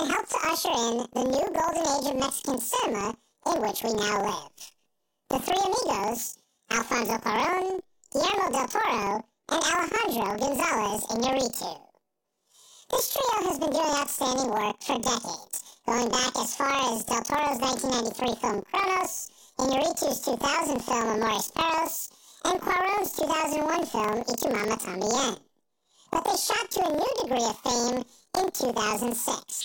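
Throughout the speech, the audio suffers from planar audio read as interleaved. Each block of left samples followed by right samples is read as alternating pairs, so every block plays twice at double speed. Blocks of about 43 ms, which fits 2048-sample blocks, make the voice sound an octave high, with a flutter at about 23 Hz.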